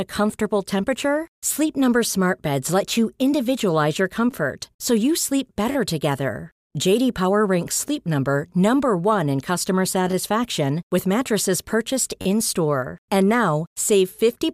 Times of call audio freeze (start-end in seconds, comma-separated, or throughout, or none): none